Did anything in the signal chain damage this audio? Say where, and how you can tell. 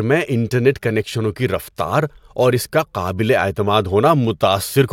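Yes. The speech has regular clicks about every 1.23 s, from 0.55 s to 4.25 s, about four in all. That pattern fits clock drift buffer slips at a driver or buffer stage. Two clocks likely disagree by around 150 ppm, so the buffer periodically drops or repeats a few samples.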